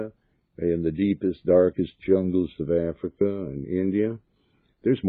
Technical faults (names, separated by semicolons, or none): none